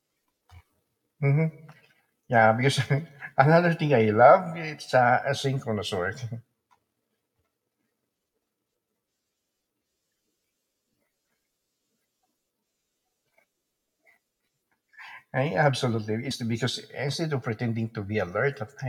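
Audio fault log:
16.30 s compressed frames skipped: roughly 70 ms of speech vanishes; the audio jumps ahead past about 3 missing frames.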